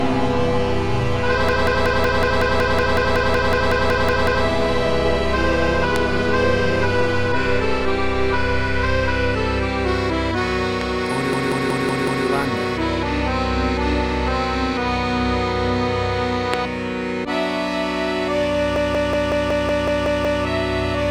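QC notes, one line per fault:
1.49–4.46 s, 11.33–12.26 s and 18.76–20.43 s, system hang loop: a single 186 ms slice of audio repeats exactly, 16, 5 and 9 times, as the playback buffer cycles while the system is frozen. This gives a machine-gun stutter at about 5.4 Hz, a length that fits an 8192-sample buffer. Little or no audio is lost once playback resumes. A spectrogram shows identical blocks tiled side by side, and the waveform shows a repeating pattern with a jump at each seam.
5.96 s, 10.81 s and 16.54 s, loud pop: a single sharp pop sits on top of the sound each time, peaking about 20 dB, 15 dB and 20 dB above the surrounding level, while the sound carries on underneath. It is likely a voltage transient from a switch, static discharge or driver glitch, shaped by the circuitry that follows. On a spectrogram each pop is a thin full-height vertical stripe. On the waveform it is a brief tall spike standing well above the envelope.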